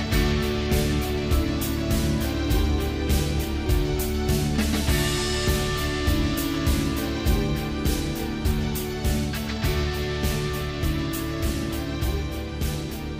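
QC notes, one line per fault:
No faults here, nothing to flag on this one.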